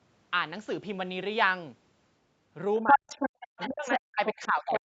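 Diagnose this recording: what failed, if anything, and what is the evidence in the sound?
Stage: call processing, echo cancellation. The speech drops sharply from 2.82 to 3.12 s, by about 40 dB at its deepest. It ducks again from 3.69 s and stays down to the end of the clip. Both drops overlap a second voice in the recording. This is likely speech suppressed in double talk. The echo canceller could not tell the near talker from the loudspeaker echo. So it attenuated everything it heard.

Stage: call processing, echo cancellation. A second voice comes through from 2.87 to 4.0 s. It is roughly as loud as the talker. Shorter, slightly quieter scraps follow at 4.25 to 4.48 s and 4.73 to 4.8 s. These sit about 5 dB below the speech. The cause is likely the other side's voice leaking through. The device played the far end on its loudspeaker. The canceller left part of that signal in the microphone feed.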